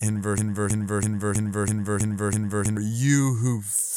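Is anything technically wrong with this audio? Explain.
Yes. From 0.38 to 2.77 s the speech sticks on one 0.33-second fragment that plays seven times back to back, a broken-record loop. The player or stream likely stalled and kept resending the last piece it held, so the speech that belonged there is missing.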